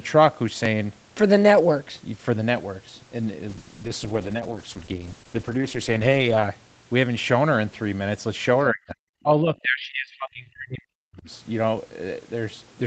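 From 3.54 to 6.61 s, a call bitrate drop takes the Opus encoder from 32 kbps down to 9 kbps. Coarser coding makes the speech sound rough and watery for nearly 3 s.

Between 8.71 and 9.04 s, and again from 9.22 to 11.3 s, the speech dips by around 40 dB in pieces. This is likely speech suppressed in double talk, where the echo canceller turned down the near talker along with the echo.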